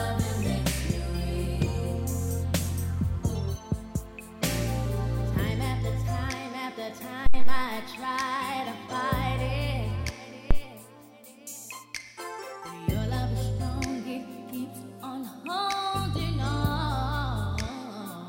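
At 7.26 s a phantom power thump hits, peaking at about -9 dBFS and dying away over roughly 97 ms before the sound settles at 7.69 s; a second, shorter one follows at 10.51 s, decaying within about 28 ms and gone by 10.63 s. Each is a supply switching on or off on a live input, its voltage step pushed through the coupling capacitors. Unlike a click or a breath pop, it is a single deep, pitchless low-frequency shove.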